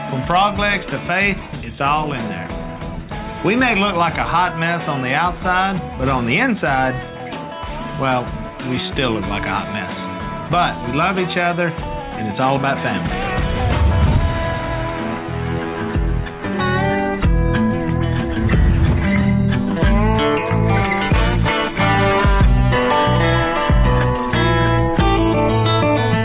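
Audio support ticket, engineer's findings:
No audible faults found in the clip; no component implicated, no action required.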